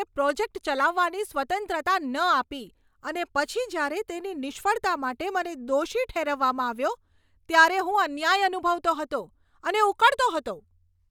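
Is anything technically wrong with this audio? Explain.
No, nothing technically wrong.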